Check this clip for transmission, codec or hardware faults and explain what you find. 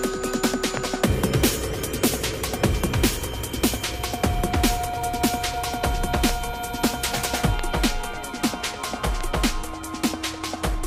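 Four loud pops interrupt the audio, at 0.77–0.79, 6.29–6.31, 7.59–7.61 and 9.21–9.23 s. Each is a single sharp crack, about 15 dB above the sound (the last nearer 10 dB), with the audio continuing beneath. The likely cause is a sudden voltage spike from a plug, switch or static discharge entering the signal path.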